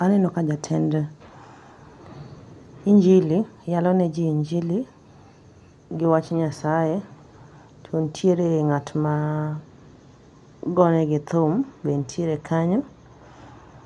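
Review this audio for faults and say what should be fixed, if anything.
Nothing needs fixing: the speech signal holds steady throughout, with no faults to correct.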